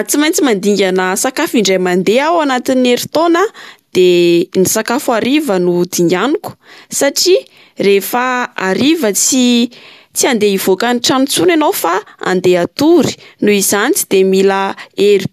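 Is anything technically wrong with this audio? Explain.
No, the speech signal shows no technical faults.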